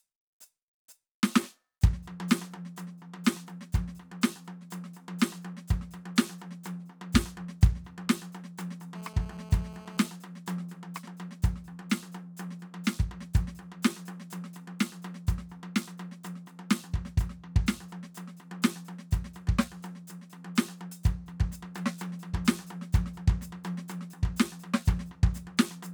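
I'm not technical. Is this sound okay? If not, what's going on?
No. From 8.95 to 10.08 s the music gets a harsh, raspy buzz. It's GSM phone buzz: a nearby mobile on a call, pulsing about 217 times a second.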